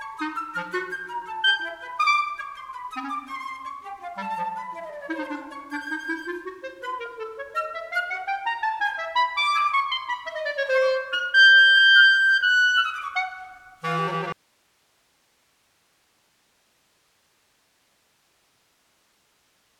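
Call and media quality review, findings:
Audio dropout to a faint residue, 14.32 s to end of clip. Abrupt cut, not a fade; only hiss remains, roughly 40 dB below the prior level. Likely the source signal was lost upstream while the downstream path stayed live and passed its own noise.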